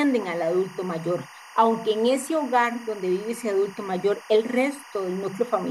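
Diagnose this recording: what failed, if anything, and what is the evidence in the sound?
Timecode bleed from the analogue wiring runs throughout: a steady chirping warble sits roughly 20 dB below the sound, flipping between pitches near 1 and 2 kHz at a 24-frame rhythm. Unlike tonal hum or interference whine, it toggles in a code-like pattern.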